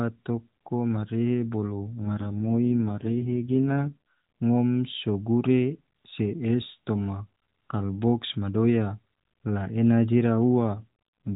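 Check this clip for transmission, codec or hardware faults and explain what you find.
Two AMR rate drops are present. The AMR rate drop runs from 2.04 to 4.16 s, after "toko marehe bolo" and ending before "ngom so gure se," and again from 10.76 s to the end at 11.36 s, after "la ena jira." The network pushed the codec from 12.2 down to what sounds like 4.75 kbps, leaving fewer pulses to model each frame. The band stays narrowband with no gap, but the speech turns buzzy and synthetic until the rate recovers.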